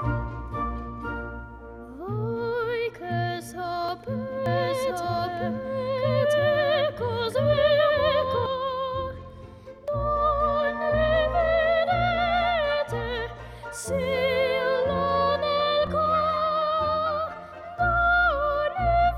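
Three brief skips break the audio at 3.89 s, 9.88 s and 15.87 s, each a tiny jump where a few milliseconds of sound vanish and the two sides butt together with no gap of silence. The even six-second spacing points to audio missing between chunks, the likely cause being a recorder or processor handling the signal in 6-second blocks and dropping a sliver each time it hands over from one block to the next. From 4.46 s to 8.46 s a second copy of the same full-range sound runs underneath, trailing by roughly a second and a half and sitting at about the same loudness as the original, with no reverb tail or room colouring on it, and it cuts in and out abruptly at those two points. That is a doubled audio track, likely from the signal being captured again through a slower path, or from an edit leaving two unsynchronised copies stacked.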